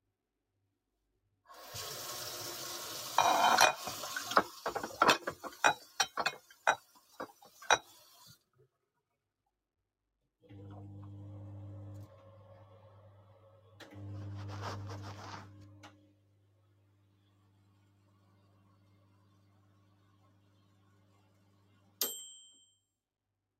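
From start to finish, a speech-tuned noise suppressor applied to these sounds treats steady material as noise, so the level swings by something like 20 dB. Onsets punch through while sustained parts sink. The waveform shows a pumping envelope, and the spectrogram shows held energy flickering and tails chopped off.

The sound cut by the noise suppressor falls hardest at 0.01 to 1.45 s (about 14 dB down), 6.4 to 7.62 s (about 10 dB), 7.83 to 10.43 s (about 14 dB), 15.9 to 22.0 s (about 14 dB) and 22.75 s to the end (about 14 dB). There, sustained and decaying sound fades and thins. The waveform shows shrunken stretches, and the spectrogram shows darkened bands and truncated decays.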